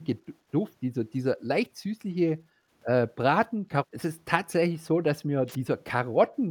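Eight quick dips in the speech, at 0.2–0.48, 0.89–0.93, 1.8–1.94, 2.48–2.71, 3.61–3.68, 3.87–3.92, 4.72–4.76 and 6.28 s to the end, point to speech suppressed in double talk. The level ducks by about 10 dB, once nearer 15 dB and once only about 5 dB. That's likely an echo canceller clamping down on the talker while the far side was also speaking.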